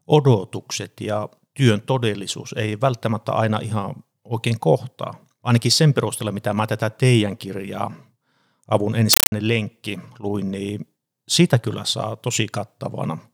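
From 9.13 to 9.32 s, before "lenkki luin niin sitä", a compressed stream played as audio replaces the sound with static chattering in 8 ms bursts at 31.25 Hz, unlike random crackle.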